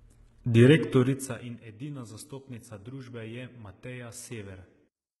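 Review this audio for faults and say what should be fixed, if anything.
HE-AAC compression, likely, throughout: treble above 11.8 kHz is gone, and what remains up top sounds copied upward, so sibilants turn gritty and metallic, fitting roughly 16 kbps. Encode at a higher bitrate or with a full-band codec so the treble is coded rather than rebuilt.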